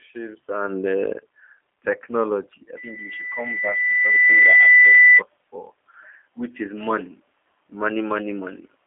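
The whole recording has passed through a G.729 codec, which fits an 8 kbit/s telephone-grade stream. The speech is rebuilt from a vocal tract filter, a pitch predictor and a few pulses per short frame rather than from the waveform itself, and nothing above 3.5 kHz survives, within a 300 Hz to 3.4 kHz line band. The damage is plainly audible: the speech stays intelligible but sounds narrow, rough and faintly synthetic.

From 2.76 s to 5.22 s, a loudspeaker feedback squeal appears. A microphone is picking up the loudspeaker it feeds, and at 2 kHz the loop gain has risen above one. That single frequency reinforces itself on each pass, swelling over roughly two seconds into a piercing steady tone that ends up about 10 dB louder than the speech and dominates it until it cuts off at 5.22 s.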